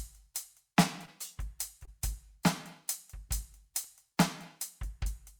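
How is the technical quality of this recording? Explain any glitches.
The music is marred by two brief concealed dropouts and a short burst of disc ticks.

Short concealed packet loss occurs at 1.05–1.09 s and again at 1.85–1.89 s. Each time about 20 ms of the stream arrived too late to decode, and the receiver bridged the gap by extending the preceding sound before crossfading back. The result is a fleeting smear or wobble. On a spectrogram each shows as a narrow vertical band where the harmonics blur or freeze. The waveform has a short stretch that repeats rather than evolves.

CD scratch ticks appear between 3.84 and 4.12 s as three sharp clicks, each well under a millisecond long. They come roughly seven times a second, matching one disc revolution each. A blemish on the disc destroyed more data than error correction could restore, so the player interpolated or muted those samples. 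Each tick is a thin full-height vertical line on the spectrogram and a single spike or notch in the waveform.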